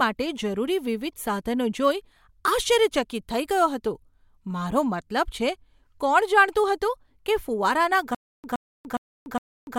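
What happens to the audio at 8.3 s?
At 8.3 s you're inside a stutter with silent gaps that starts at 8.15 s and runs to the end. The same 119 ms burst comes back four times, each followed by about 292 ms of dead silence, a 411 ms cycle, likely a stalled stream replaying its last fragment.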